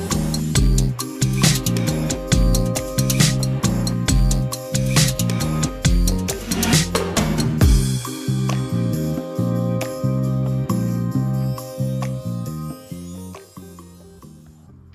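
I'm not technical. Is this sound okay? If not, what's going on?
Yes, no faults are audible.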